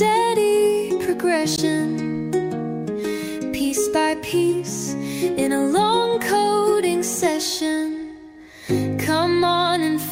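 At 1.55 s the compressed stream carries damaged data: corrupted bytes make the decoder misread the frames there and lose sync until it locks onto a later frame header. The result is a brief blip, ending by 1.60 s.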